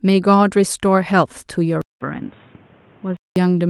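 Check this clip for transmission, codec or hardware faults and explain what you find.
One fault is audible: an input switched to a poorer device. From 1.82 to 3.36 s, after a gap of about 190 ms, the speech turns dull and boxy at the same level, with nothing above 3.8 kHz and a new noise floor around 30 dB down. This is likely a change to a narrower-band microphone. A spectrogram shows the upper band vanishing abruptly, and the waveform shows a flat gap at the switch.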